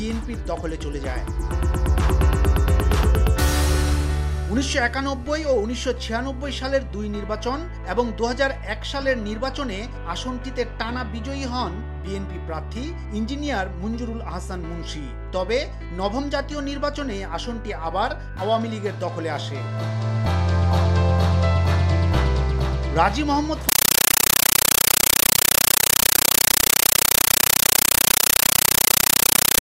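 From 23.69 s to the end, the audio is replaced by a compressed stream played as audio: a Dolby Digital (AC-3) bitstream reaching the output as if it were PCM, undecoded. It sounds like harsh, very loud chattering static. The waveform shows noise bursts about 9.33 ms long, each followed by flat zero padding, repeating at 31.25 Hz. On a spectrogram these appear as broadband vertical stripes with silent gaps, a pattern that fits AC-3 frames sent over S/PDIF or HDMI.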